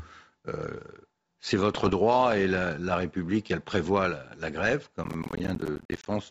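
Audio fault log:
1.74–1.98 s, bit errors on an ADPCM link: flipped bits knock the decoder's step size off, giving pops and rough bursts before "et la", seen as broadband spikes and level jumps.
5.04–6.06 s, processor overload crackle: after "elle prévoit la grève", missed roughly 10 ms buffers leave many silent gaps, heard as gritty crackle, shown as dense dropout notches in the waveform.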